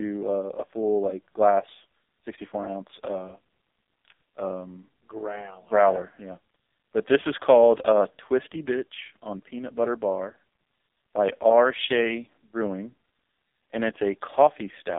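Throughout, the speech carries AMR narrowband mobile codec damage: band-limited to 250 Hz–3.6 kHz, nothing above 3.7 kHz, heavily buzzy and synthetic, which fits the 5.15 kbps mode.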